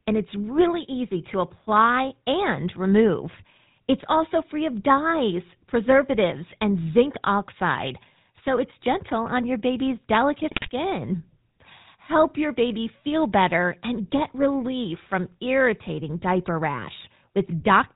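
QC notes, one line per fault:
Throughout: GSM full-rate codec. The speech has a buzzy, gravelly roughness and nothing above 4 kHz. The vocal tract is modelled and driven by sparse, regularly spaced pulses, so fine detail is lost. The damage is plainly audible and fits a 13 kbps GSM stream.
10.48 to 10.70 s: GSM bit errors. Just after "gentle on your baby's", the speech breaks into squawks, pops and gargling for about 0.2 s. Corrupted filter, pitch and gain values distort the spectrum and level frame by frame. The density points to 11 damaged frames.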